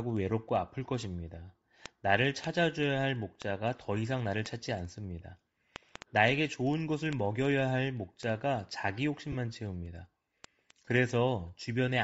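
Across the whole speech clip the upper spectrum sounds thinned and filled with a grainy, breathy hiss, and sibilants and vowel edges carry a coarse texture. This is likely Bluetooth LC3 compression: at a low rate the transform codec zeroes much of the high band and substitutes shaped noise. The degree of damage fits about 32 kbps, and the time smearing points to short 7.5 ms frames.

From 0.10 s to 12.01 s there are word clock ticks, sharp clicks of uneven strength recurring steadily about every 70 ms, around two hundred in all. The receiving device is running on its own clock rather than locked to the sender's digital link. The two clocks differ by about 400 ppm, so each time they slide past each other a single sample is dropped or repeated, and the sound briefly misreads into a tick.

Lost LE Audio frames occur at 9.32 to 9.35 s, a 30 ms gap that fits four 7.5 ms frames, and at 10.85 to 10.87 s, a 22.5 ms gap that fits three. 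In each case the decoder conceals the missing data by reusing the previous spectrum with randomised signs. The voice's harmonic structure collapses into a short noisy smear.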